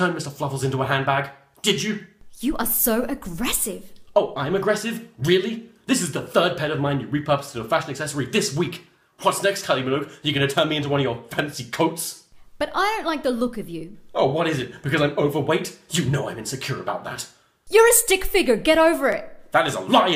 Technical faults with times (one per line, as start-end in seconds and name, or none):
4.08 overlapping chunks
14.11 overlapping chunks
19.12 overlapping chunks